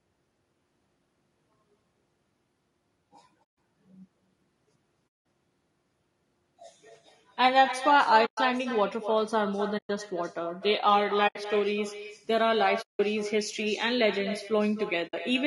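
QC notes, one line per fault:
throughout: echo with no canceller. Every phrase returns around 300 ms later as a thinner copy about 10 dB below the direct sound, consistent with the far end's loudspeaker feeding its microphone and nothing removing that return before it comes back across the network.
throughout: low-delay AAC compression. The speech is plainly rough and grainy, with noise filling gaps between harmonics and a dulled, somewhat synthetic top band. This is likely AAC-ELD, whose short frames resolve pitch poorly; the damage level fits a bitrate near 32 kbps.
3.44–3.56 s, 5.10 s, 8.25–8.38 s, 9.77–9.90 s, 11.27–11.36 s, 12.81–13.00 s, 15.07–15.14 s: AAC frame loss with muting. Brief soft-edged holes of roughly 60 to 180 ms, where lost frames were decoded as silence and overlapping windows faded the sound out and back in.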